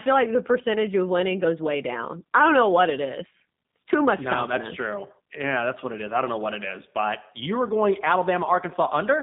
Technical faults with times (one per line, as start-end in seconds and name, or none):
0.00-9.22 G.729 codec